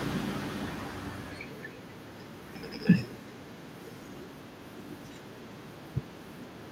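From 0.05 s to 1.91 s, the speech shows automatic gain falling. The automatic gain control judged the input too loud and pulled its gain down by about 10 dB. The voice starts loud, then gradually sinks, and the background sinks with it.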